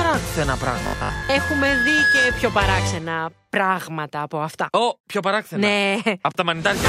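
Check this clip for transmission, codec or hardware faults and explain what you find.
Two faults turn up, overlapping in the first three seconds.

From 0.64 s to 2.62 s a single piercing tone at 1.7 kHz swells over roughly a second and a half until it sits about 5 dB above the rest of the sound, then stops. This is loudspeaker feedback squeal. A microphone is hearing the loudspeaker it drives, and at 1.7 kHz the loop returns more than it sends out, so that one frequency keeps feeding itself until the loop is broken.

Between 0.83 s and 1.29 s, inside that squeal, the sound goes rigid and metallic, with a fixed 50 Hz buzz that only loosely follows the underlying audio. This is robotic sound from repeated short buffers, likely caused by audio arriving too seldom, so playback loops the last short slice instead of waiting. Most of that stretch is repetition rather than fresh audio. The 50 Hz buzz fits a repeated slice about 20 ms long, since the repeat rate sets the imposed pitch.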